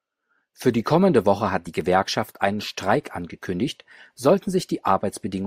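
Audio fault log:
No fault can be heard anywhere in this speech recording. There is nothing here to log.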